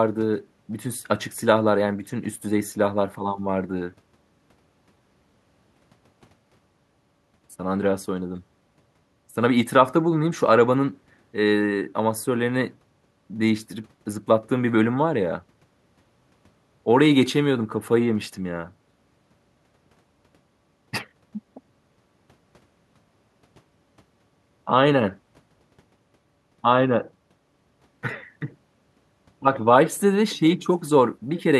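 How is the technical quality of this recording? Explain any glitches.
No audible glitches or faults.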